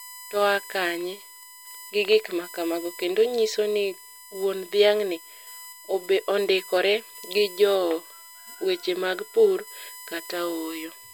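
USB whine throughout: 1 ms bus frames give a 1 kHz tone, strongest near 12 kHz, about 20 dB below the speech, drawn as flat spectrogram lines.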